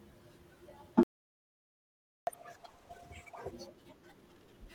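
At 1.03 s the speech halts mid-flow for about 1.24 s, a playback stall, likely from the player starving for data; it resumes where it stopped rather than skipping ahead. From 2.27 to 3.51 s comes catch-up at higher speed: the backlog plays at double speed, pitch rising by roughly ten semitones, then snaps back, unlike a steady pitch shift.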